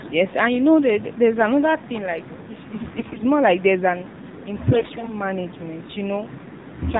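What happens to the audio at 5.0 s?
Right around 5.0 s you're inside a burst of AMR bit errors, running from 4.72 to 5.11 s. Flipped bits in the weakly protected part of each frame misplace the excitation pulses and skew pitch, gain and spectral detail. Roughly one bit in ten looks corrupted, so the voice holds its pitch and loudness but turns hoarse, scratchy and gargly.

Underneath that is the AMR narrowband mobile codec at 7.4 kbps, which is plainly audible. With nothing above 4 kHz and so few bits for the vocal-tract model, the speech comes out muffled, buzzy and a bit synthetic, and the errors land on top of it.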